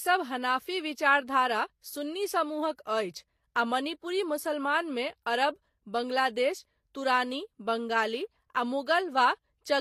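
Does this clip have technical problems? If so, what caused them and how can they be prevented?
Yes. Throughout, the speech carries layered codec artefacts heard together, with nothing above 16.5 kHz. The likely cause is transcoding between lossy codecs, consistent with HE-AAC at 40 kbit/s then Vorbis at 44 kbit/s. A spectrogram shows a hard ceiling at 16.5 kHz. Prevent it by encoding once from the original source.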